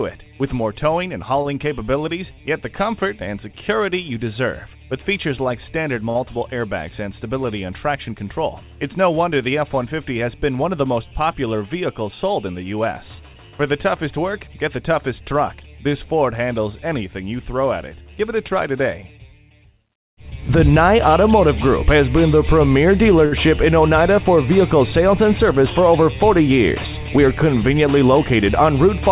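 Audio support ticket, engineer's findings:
Short stalls from a late packet at 1.42, 6.10 and 23.26 s: sound held for 28, 52 and 61 ms, slight buzz or dip. Jitter buffer ran dry, receiver stretched the last audio, nothing lost.

Jitter buffer speed-up at 11.04–11.47 s (107%), 14.18–14.81 s (109%) and 26.02–27.45 s (104%): faster at same pitch, hurried in the first two. Buffer trimming pitch periods to shed excess delay, about 40, 70 and 50 ms.

Call path: band stops at 4 kHz, which fits G.711 mu-law at 64 kbps.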